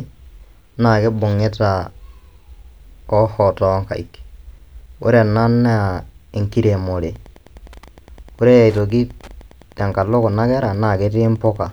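Speech picks up Wi-Fi interference from 7.11 s to the end: faint ticks roughly 30 dB below the voice, about ten per second from a rectified 102.4 ms beacon, not a continuous buzz.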